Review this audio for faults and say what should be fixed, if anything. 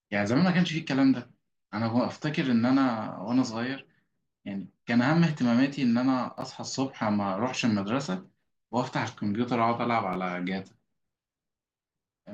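Chunks out of order at 6.38 to 6.42 s and 10.13 to 10.16 s: a short block of the speech plays after the blocks that should follow it, producing a jumbled moment. The block length, about 10.67 ms, fits a 512-sample buffer at 48 kHz. The first event sounds three blocks late, the second one block late. Reassemble by sequence number or timestamp in a jitter buffer instead of playing blocks in arrival order.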